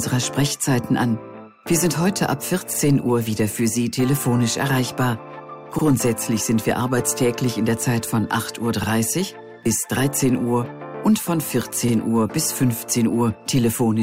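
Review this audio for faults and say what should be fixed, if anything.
There's a stutter from overlapping chunks, a short repeat of about 50 ms at 2.74–2.79, 5.79–5.84, 8.84–8.89 and 11.89–11.94 s. Each join between 3-second chunks starts a little before the previous chunk ended, so the last sliver of sound plays twice and you hear a regular tick or hiccup about every three seconds. Make sure each chunk begins exactly where the previous one finished, or crossfade the overlap instead of playing both copies.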